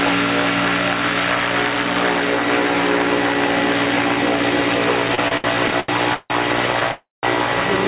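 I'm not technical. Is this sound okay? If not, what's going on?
No. From 5.08 to 6.32 s there are repeated stalls (stutter): eight brief hold-ups, the longest about 0.16 s, make the sound drag and catch without losing anything. Then at 6.92 to 7.25 s comes a call audio freeze, one longer stop rather than many small ones. The last sound lingers and fades into about 0.17 s of silence, most likely because the call's data arrived late, before resuming where it left off.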